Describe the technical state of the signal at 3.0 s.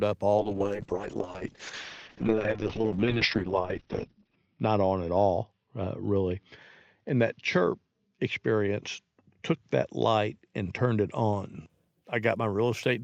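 At 3.0 s the signal is inside a call bitrate drop that runs from 0.38 s to 11.75 s. The call's bandwidth estimate fell, so the encoder was forced to spend far fewer bits. The speech is coded coarsely and sounds rough and watery. The top end is cut off, with the audio band shrinking from 20 kHz to 6 kHz. The dullness fits a fall from about 32 kbps to roughly 6 kbps, held at its worst for about 4 s.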